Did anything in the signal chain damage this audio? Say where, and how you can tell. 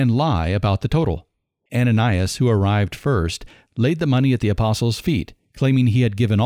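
Yes. Sample clock jitter at the converter stage, from 4.20 s after "arrived first laid the" to the end at 6.46 s: a roughness rising with louder, brighter speech. Timing error of around 2 µs scales with waveform slope, leaving noise roughly 40 dB below the signal.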